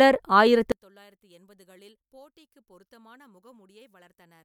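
From 0.72 s to the end, the speech drops by about 33 dB and turns faint, with its centred body and low end almost gone. The likely cause is one channel inverted: with one stereo channel at reversed polarity, the material common to both channels cancels when they are summed to mono. What survives is only the small difference between the channels, which leaves a faint residue of the speech.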